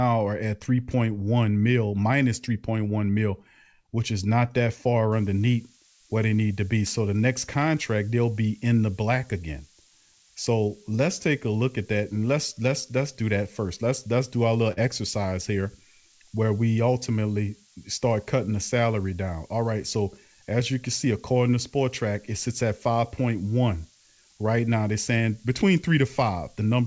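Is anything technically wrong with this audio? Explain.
Yes, two faults are audible.

Switching supply whistle: from 5.12 s, just after "which is not that", to the end of the clip, a high whistle sits around 15 kHz, wandering between roughly 13.1 and 16.8 kHz, at around 15 dB below the speech. It comes from a switching power supply running in an audible burst mode or beating against another supply. As the load shifts, the pitch drifts. The call path's G.722 codec at 64 kbps passes nothing above 8 kHz, so this tone must have entered after that stage.

Burst of packet loss: at 14.72–14.80 s, a burst of packets failed to arrive in time for playback. For 48 ms, the receiver's concealment repeats the last received sound and fades it down. When playback resumes, the sound jumps ahead, with 40 ms of content from that gap missing. Together this is heard as a brief smeared, dying hold followed by an abrupt skip.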